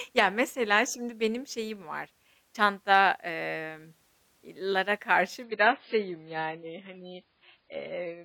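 From 5.44 s, after "çanta emm iii lara", the adaptive stream drops abruptly to a lower bitrate: speech turns dull and watery, the spectrogram cut flat above 5 kHz.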